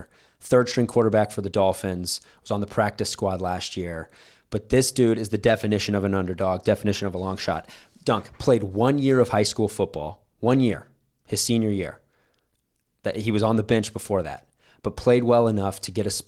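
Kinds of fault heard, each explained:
No faults are heard here.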